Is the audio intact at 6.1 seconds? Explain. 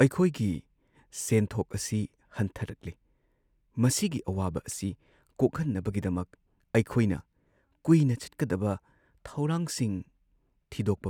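Yes, at 6.1 seconds the speech plays through intact, with no audible fault at that moment.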